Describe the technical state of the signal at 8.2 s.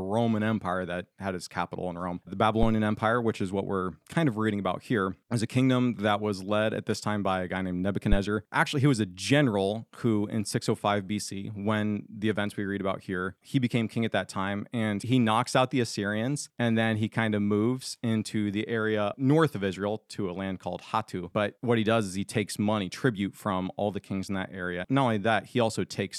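A phantom power thump occurs from 8.12 to 8.18 s. A supply switched on or off at the live input sends a step through the coupling capacitors, giving a deep thud peaking about -10 dBFS. It shows as one large low-frequency swing on the waveform.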